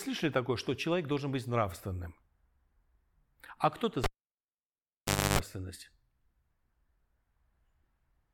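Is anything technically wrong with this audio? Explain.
Yes. At about 4.04 s the cable is pulled and plugged in: a pop, then near silence for about 1.3 s while it's unplugged, a burst of 50 Hz mains buzz lasting about 0.29 s as only the tip makes contact, and another pop when the speech returns around 5.39 s.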